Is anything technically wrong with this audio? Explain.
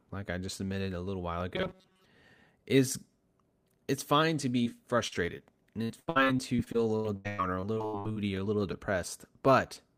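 Yes, there are three kinds of fault.

From 1.56 to 2.05 s there is robotic sound from repeated short buffers. Most of this stretch is made of a short slice played again and again, which imposes a fixed 188 Hz buzz. That rate fits a buffer of about 5 ms. The likely cause is audio arriving too seldom, with the last buffer looped to cover the wait.

Short concealed packet loss occurs at 4.63–4.67, 5.07–5.14, 5.26–5.30 and 5.38–5.41 s. Holes of 20, 40, 20 and 20 ms were patched by extending the preceding sound and then blending back. Each one is heard as a brief smear or wobble.

From 5.83 to 8.18 s there is repeated packet loss, heard as robotic sound. Nearly twenty holes, totalling 820 ms and up to 96 ms each, were filled by extrapolation, which covers about a third of the span. The result is choppy, with pieces of the sound missing.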